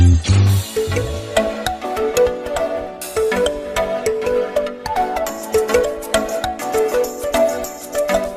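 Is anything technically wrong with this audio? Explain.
No, nothing in this audio points to a technical problem, and the signal holds steady throughout.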